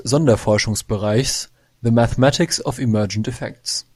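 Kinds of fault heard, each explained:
One channel drops out: From 3.37 to 3.49 s, the speech suddenly falls in level by about 6 dB, then returns just as abruptly. The gap lasts about an eighth of a second. The likely cause is one side of a stereo feed going silent for that moment. When the two channels are summed to mono, sound shared by both loses half its contribution, which gives the 6 dB drop. Anything carried only on the lost side vanishes entirely.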